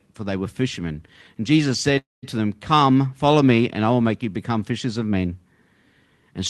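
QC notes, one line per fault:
1.98–2.25 s, call audio freeze: the speech stops and a decaying buzz carries the last sound for about 0.24 s, ending in near-silence, likely from delayed packets emptying the jitter buffer. Nothing is lost; the speech resumes later. Spectrogram shows a smeared, fading band, then a dark gap.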